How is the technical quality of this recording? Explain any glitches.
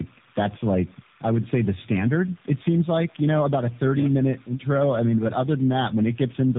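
Quality is poor throughout because of tandem speech coding. The speech was decoded and re-encoded through several speech codecs in series, compounding roughness, muffling and warble, with nothing above 3.7 kHz.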